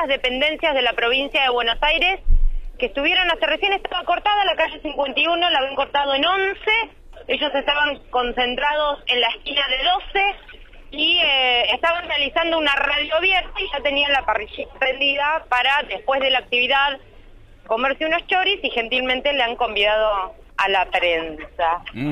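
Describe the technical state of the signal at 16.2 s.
Nothing at 16.2 s points to a technical fault; the signal is intact at that point.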